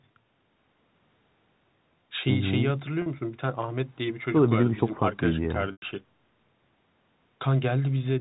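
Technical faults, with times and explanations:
3.02 to 3.06 s and 5.72 to 5.82 s, packet loss with pitch repetition. The audio drops out twice, for 40 ms and then 100 ms. The receiver bridges each gap by repeating the last pitch period. The first gap is short, so it sounds like a briefly held, buzzy tone. The second outlasts the fade of about 50 ms, so the repeat dies into silence, and speech returns with a short cross-fade. The lengths fit two and five lost 20 ms packets.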